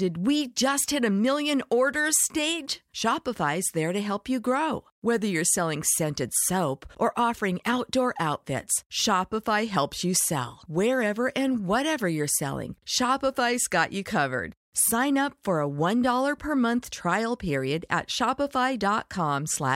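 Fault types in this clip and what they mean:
No technical faults detected.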